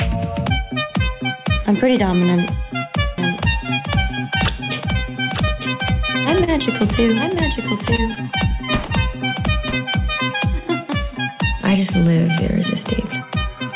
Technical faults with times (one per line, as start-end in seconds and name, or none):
3.18-9.76 doubled audio track
6.44-6.49 short stall from a late packet
7.95-8.18 short stall from a late packet
8.86-8.91 short stall from a late packet